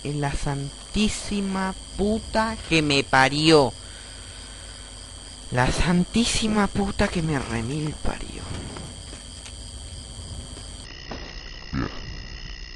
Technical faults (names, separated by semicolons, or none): section at the wrong speed